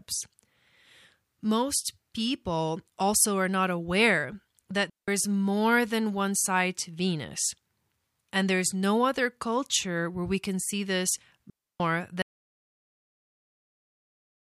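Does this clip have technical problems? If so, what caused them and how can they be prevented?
Yes. Two digital wireless dropouts occur where the radio link between transmitter and receiver lost too much data and the receiver muted its output instead of passing corrupted audio. The first is at 4.90 to 5.08 s, a hole of about 180 ms between "are not aware that" and "is more than one". The second, at 11.50 to 11.80 s, lasts about 300 ms just after "we can see this". Each is a clean gap of near silence with a very quick fade and no burst of noise on either side. Keeping the transmitter within clear line of sight and range of the receiver, on an uncrowded frequency, prevents this.

From 12.22 s to the end of the clip there is an audio dropout to silence. The input was likely lost through a disconnected device, a failed link or an accidental mute while the recorder kept writing silence. The sound stops abruptly and never returns, and the gap is total silence with no room tone, so whatever followed is missing. 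Monitoring the input on headphones and securing cables and mute controls during recording prevents this.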